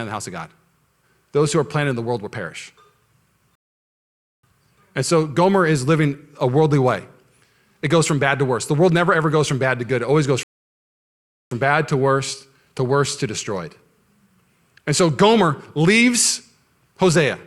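Speech that twice drops into dead silence and then picks up exactly where it left off: from 3.55 to 4.43 s, and from 10.43 to 11.51 s between "always goes" and "bad to worse to". Each is a rebuffering stall, the player running dry of downloaded audio and waiting, adding about 0.9 s and 1.1 s with nothing lost.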